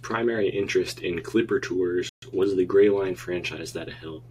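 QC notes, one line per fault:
2.09–2.22 s, playback stall: the speech cuts to silence mid-flow for about 132 ms, then carries on. The likely cause is the player running short of data or its output thread being blocked, leaving nothing to send until it recovered.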